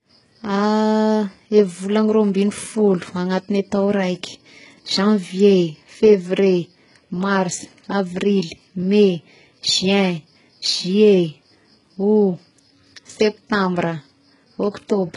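Throughout the speech, the top end is bright but synthetic, stopping entirely above 11.1 kHz, and s sounds come out gritty and metallic. The likely cause is heavy HE-AAC compression, consistent with a very low bitrate near 12 kbps, where copied-up bands replace real treble rather than simply removing it.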